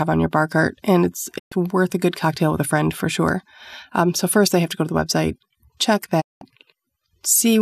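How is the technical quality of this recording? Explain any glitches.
The recording has two digital broadcast dropouts. At 1.37–1.53 s, between "bar cart and it's" and "worth a good cocktail", and again at 6.20–6.43 s after "to the website check", the receiver lost or rejected corrupted frames and muted, fading out over about 20 ms. Roughly 120 ms and 190 ms of programme vanish, which fits several consecutive bad frames. On a waveform each appears as a flat gap with short ramps, and on a spectrogram as a blank vertical band across all frequencies.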